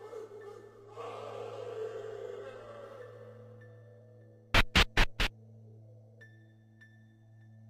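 From 0.84 s to 2.84 s the audio switches abruptly to an adaptive stream at a lower bitrate. The connection slowed and the player fetched a leaner version, so for two seconds nothing sounds above 12.3 kHz, the upper treble takes on a synthetic, reconstructed sheen, and coding artefacts rise, which fits a very low-rate HE-AAC encoding. Unlike a dropout or packet loss, there is no gap or glitch, only a sudden step down in quality and back.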